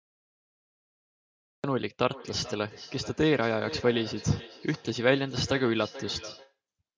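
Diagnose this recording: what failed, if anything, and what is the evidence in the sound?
Cut-off start at the recording stage: digital silence until 1.64 s, then sound begins abruptly mid-attack with no fade, unlike a dropout, which would interrupt audio already running.

Feedback echo between two devices in call processing: from 2.1 to 6.58 s, sound returns roughly every 0.4 s, about 16 dB down, repeating rather than decaying smoothly like room reverberation.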